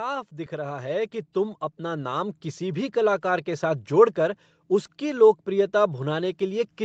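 From 0.49 s to 2.9 s, an automatic gain rising fault occurs. The gain control judged the input too quiet and slowly raised it by about 8 dB. The speech and background swell together, settling just before "कलाकार के". Highs stop near 8 kHz, from the call codec.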